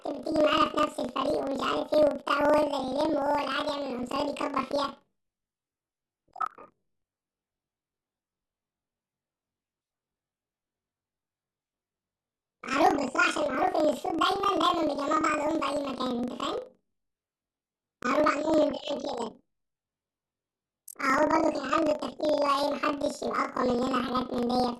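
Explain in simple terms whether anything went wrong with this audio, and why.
Planar audio read as interleaved, throughout the whole clip: the speech sounds an octave too high with a steady flutter about 23 times a second. The audio comes in chunks of about 43 ms, which fits a 2048-sample block. Each chunk stores all its left-channel sound and then all its right-channel sound, but it was read as if the two alternated. So every chunk plays twice at double speed, once for each side, and the overall pace stays normal.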